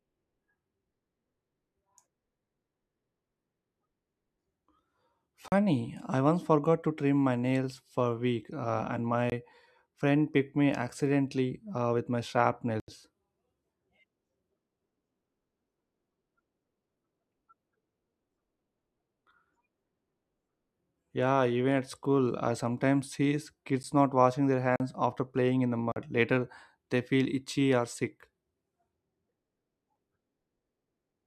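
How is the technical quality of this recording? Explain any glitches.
The recording has six dropouts, all of the same kind.

Blocks of digital silence occur at 5.48–5.52 s, just before "I once forgot to"; 9.30–9.32 s, right after "a week uh and"; 12.80–12.88 s; 23.83 s; 24.76–24.80 s; and 25.92–25.96 s, after "after playing in the". Each time, the output buffer apparently wasn't filled in time, so the samples became zeros. The sound cuts out and back abruptly, with no fade. The 11 ms gap sounds like a tick or dip rather than silence, and the longer 22 to 80 ms gaps sound like pops or short holes in the speech, depending on their length.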